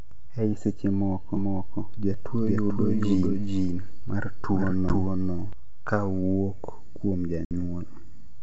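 From 1.37 s to 5.53 s the speech is heard twice: a doubled audio track, with a second full-band copy running roughly 0.4 s behind and at about the same level. It has no reverberant tail or room colouring, and it cuts in and out abruptly, ending just before "kawuok kuom". The likely cause is the same signal being captured again through a slower path, or an edit leaving two copies out of alignment.

At 4.89 s, inside the doubled section, comes the first packet loss on an ADPCM call. About 10 ms of audio, roughly a single packet, drops to silence with hard edges. When sound resumes, the decoder's adaptive predictor and step size no longer match the sender's, so the speech comes back slightly distorted and clears within some tens of milliseconds.

At 7.45 s, right after "kawuok kuom", a longer loss removes about 60 ms, which suggests several consecutive packets. The recovery shows the same mistracking: some distortion before the speech settles. 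Throughout, the wideband G.722 coding gives a clear band up to about 7 kHz with at most a faint upper-band hiss.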